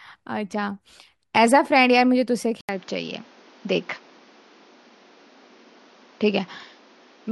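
Speech that turns abruptly duller and narrower at 2.61 s, after a brief 80 ms silence, and stays that way to the end, with nothing above 7 kHz and a new background noise floor roughly 30 dB down, while the level holds steady. The likely cause is the input switched to a poorer device mid-recording.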